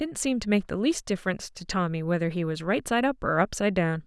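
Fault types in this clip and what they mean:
No technical fault can be heard anywhere in the speech signal: level, continuity and timing stay steady throughout.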